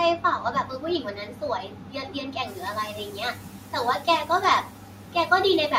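Speech cut by the noise suppressor at 0.17–1.43 s, 1.59–3.74 s, 3.99–4.08 s and 4.62–5.31 s: the suppressor mistakes parts of the speech for background and pulls them down by about 11 to 13 dB, so syllables sound swallowed and faint. The room noise, which rises by about 17 dB around 2.5 s, then sits about 23 dB below the speech.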